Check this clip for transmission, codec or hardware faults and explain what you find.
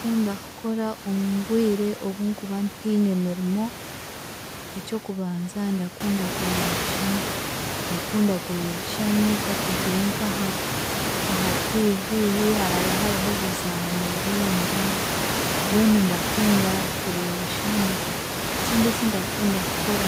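No faults can be heard in this speech.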